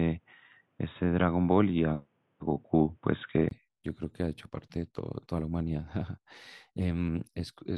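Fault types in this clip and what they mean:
Input switched to a poorer device: the speech starts dull and boxy with nothing above 3.8 kHz, then brightens after a brief 20 ms gap near 3.51 s, likely from a device change.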